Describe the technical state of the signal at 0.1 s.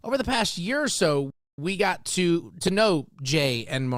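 At 0.1 s the audio is intact, with no fault present at that moment.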